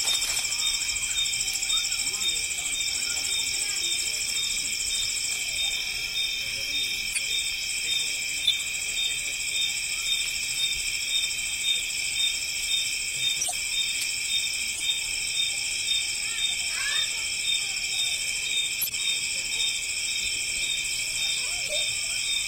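Sample clock jitter runs throughout. The converter clock wobbles by a few microseconds, adding hiss and roughness that grow on loud, bright passages, sitting around 20 dB down.

Corrupt frames were decoded at 3.55, 7.13, 8.45, 13.41, 14.75, 18.81 and 21.67 s. Each damaged burst spans a few frames, heard as brief chirps or noise blips.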